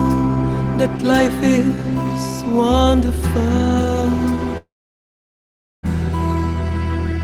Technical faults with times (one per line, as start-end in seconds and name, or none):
4.57-5.86 long network dropout